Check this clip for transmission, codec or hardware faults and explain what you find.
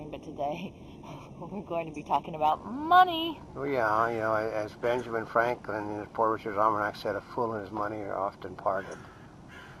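One fault, in the first 2.52 s: channel delay (comb filtering). One channel runs roughly 0.3 ms late, and summing the two cancels shared content at evenly spaced frequencies starting around 1.5 kHz, leaving fixed notches that make the sound hollow and phasey.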